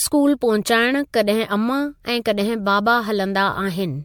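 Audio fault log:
Throughout: generation loss. The speech sounds swirly, hollow and smeared, with blurred consonant attacks. That is worse than one MP3 pass near 100 kbit/s would leave. The likely cause is around seven repeated encodes, each adding fresh quantisation noise and spectral holes on a shifted frame grid.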